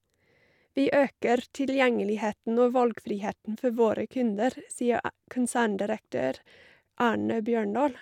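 Nothing in this speech recording stands out as a technical problem, so there's nothing here to flag.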